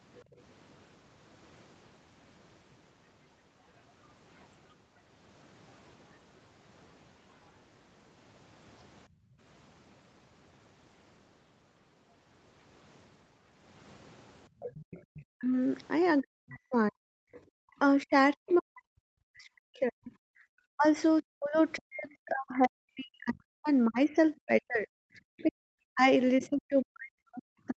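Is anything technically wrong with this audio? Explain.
Yes. Three kinds of echo-canceller fault can be heard in this speech.

Background gated by the echo canceller occurs three times: 0.25 to 0.38 s, 9.08 to 9.4 s, and 14.49 to 15.08 s. While the far end was playing through the loudspeaker, the canceller clamped the microphone hard. The room tone sinks by about 11 dB in the first dip and about 20 dB in the other two. Each dip lasts only a fraction of a second. The background then snaps back as the canceller releases.

The other side's voice leaking through is heard from 14.6 to 18.54 s, 20.84 to 21.6 s, and 25.38 to 26.46 s. A second, fainter voice sits underneath the talker. It is roughly 20 dB below the speech in the first stretch, about 30 dB below in the second, and about 25 dB below in the third. The likely cause is loudspeaker output reaching the microphone and only partly being removed by the echo canceller.

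Speech suppressed in double talk runs from 15.36 s to the end of the clip. During this span the talker's voice dips. At its worst it falls by around 40 dB. This overlaps the leaking far-end voice, so both sides were likely talking at once. The canceller could not separate the local talker from the echo and turned everything down together.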